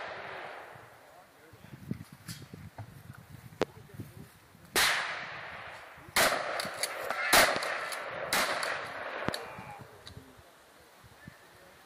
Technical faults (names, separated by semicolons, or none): drift correction step; loud pop